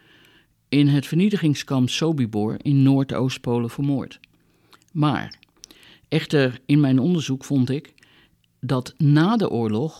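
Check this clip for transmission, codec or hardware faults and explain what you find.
Nothing wrong can be heard anywhere in the speech.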